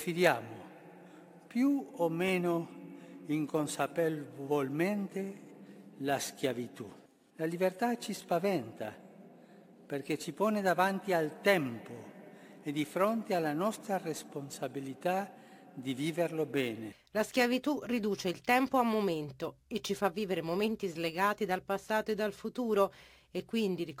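Throughout, crude rate conversion: samples were repeated without filtering, which fits a step from 32 kHz to 44.1 kHz. The patterned timing error, roughly 25 dB below the sound, adds shifted inharmonic copies, a gritty fizz that tracks loud and high passages.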